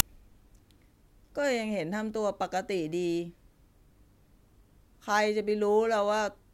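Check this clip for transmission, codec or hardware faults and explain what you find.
One fault is present in this speech clip. File tags played as audio, at 0.00 s: a compressed cover picture embedded in the file's tag block is read as if it were samples. Its near-random bytes play as a brief, hard-edged burst of very loud white noise.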